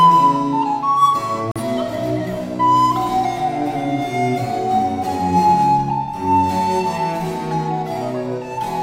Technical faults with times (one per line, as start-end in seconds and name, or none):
1.51-1.61 digital broadcast dropout